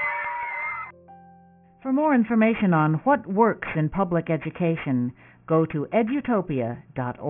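The audio was resampled down without an anti-alias filter, from what sounds like 48 kHz to about 6 kHz, so throughout the clip, content above the 3 kHz folding point reflects back as aliasing: gritty, metallic tones at unrelated pitches, around 20 dB below the signal.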